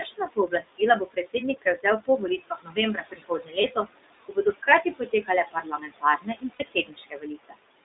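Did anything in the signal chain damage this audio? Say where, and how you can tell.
Yes. Noise suppressor artifacts run throughout, in the call processing stage: background drops about 21 dB between phrases and returns under speech.

The iLBC codec also affects the whole clip. Audio is confined to roughly 250 Hz to 3.7 kHz with a rough, synthetic edge, which fits the 15.2 kbps mode with 20 ms frames.

Speech cut by the noise suppressor occurs at 0.01–0.81, 1.0–1.35, 2.28–2.78, 2.95–3.89 and 4.25–7.58 s. Soft consonants and endings sink by about 19–22 dB because they were mistaken for noise.

Lost iLBC frames appear at 3.62–3.65 and 6.54–6.63 s, a network fault. The decoder repeats the last pitch cycle as a brief buzzy held vowel, then recovers at once because each frame stands alone.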